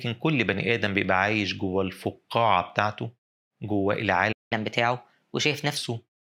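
At 4.32 s the speech cuts out abruptly mid-flow and stays silent until 4.53 s, a gap of about 187 ms. This playback stall was likely caused by the player running dry of buffered data, or by its audio thread being blocked, until output resumed.

From 4.53 s to 5.77 s the speech runs noticeably fast and sits higher, raised by about two semitones, before settling back to normal. This catch-up at higher speed comes from the player resampling its backlog at 1.15 times normal rate to recover the time lost in the stall.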